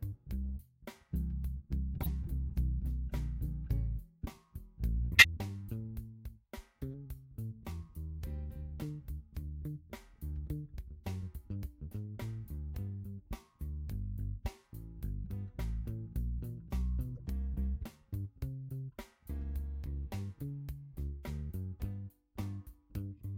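Damaged compressed frames reached the decoder, which played them anyway. This corrupt frame decoded fault occurs three times. At 2.01 to 2.09 s, misread gains and codes throw energy into the wrong frequencies, giving an error peaking around -20 dBFS. At 5.13 to 5.25 s comes the loudest, an error near -10 dBFS. At 17.15 to 17.20 s there is only a faint error around -40 dBFS. Each lasts roughly as long as a few frames, which fits two to five bad frames in a row.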